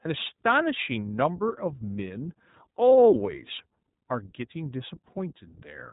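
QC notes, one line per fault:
Throughout: iLBC codec. Nothing above 3.8 kHz gets through, so the speech sounds narrowband and boxy. Each 20 ms frame's excitation is coded independently, leaving a plainly rough, synthetic edge. This fits iLBC's 15.2 kbps mode.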